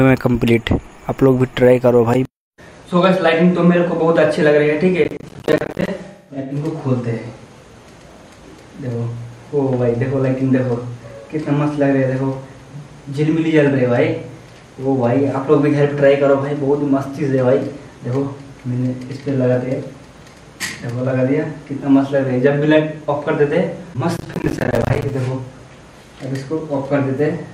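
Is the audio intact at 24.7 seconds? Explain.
No. At 24.7 seconds the audio sits inside a burst of processor overload crackle running from 24.17 to 25.1 s. The processor repeatedly misses its deadlines for buffers of around 10 ms, and dozens of them drop out as brief silent gaps. The hard edges of those gaps add a gritty tearing over the sound.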